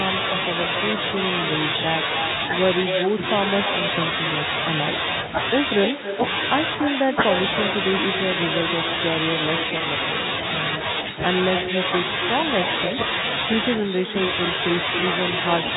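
From start to finish the speech carries an uncancelled echo, or echo with no canceller: the far end's loudspeaker feeds its microphone and nothing removes it, so each phrase returns about 8 dB quieter, around a third of a second late, and thinner. On a spectrogram every syllable has a fainter twin shifted right by roughly 300 ms.

At 9.78 to 9.80 s comes packet loss with pitch repetition. About 20 ms of audio, consistent with a single lost packet, was bridged by repeating the last pitch period, giving a brief held, buzzy tone. The waveform shows identical cycles there, and the spectrogram shows flat, steady harmonic lines.

The narrowband G.711 telephone band is audible throughout, with nothing above 4 kHz.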